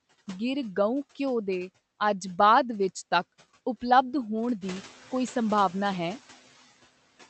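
Right from the start you can hear noise suppressor artifacts. The suppressor is pulling down whatever bands it reckons are steady noise, by about 11 dB, and it decides that frame by frame. So the background dips in the gaps and swells back under the speech. The speech itself rides over a call-codec path that tops out around 8 kHz.

Then, around 4.5 s, the room noise jumps up by about 13 dB, and from 4.61 to 4.85 s you get the noise suppressor catching up. Its noise estimate is still tuned to the quieter background, so for that stretch the louder noise gets only about 4 dB of reduction and comes through. Over those 240 ms the estimate adapts and the noise sinks back down to roughly 18 dB below the speech.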